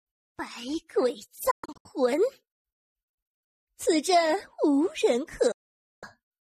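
At 1.51 s the audio breaks up in a digital broadcast dropout. The receiver stops getting decodable frames and mutes, leaving several short holes across 336 ms that total 240 ms of silence, the longest run being 120 ms. A second dropout at 5.51 to 6.03 s mutes 504 ms of audio. Each edge fades in about 8 ms. The waveform shows flat gaps, and the spectrogram shows empty vertical bands across all frequencies.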